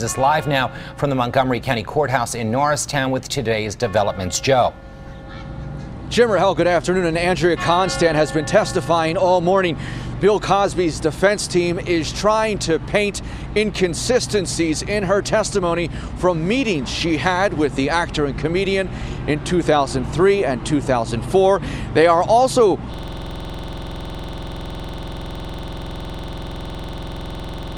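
A system hang loop starts at 22.94 s and lasts to the end. The machine froze while the sound hardware kept replaying one 46.44 ms slice of its ring buffer, which fits a 2048-sample buffer, over a hundred times, giving a coarse 21.5 Hz buzzing stutter.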